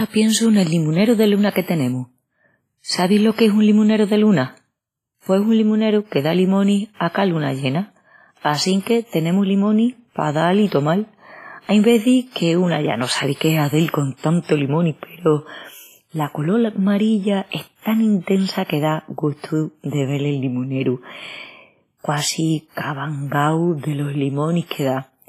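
Throughout the speech, WMA compression is the likely cause of a ringing, washy smear and a hiss that swells and fades with the signal, with nothing above 15.5 kHz. The heavy damage points to a low bitrate around 24 kbps. Unlike noise-reduction artefacts, the smear spreads around each sound across tens of milliseconds.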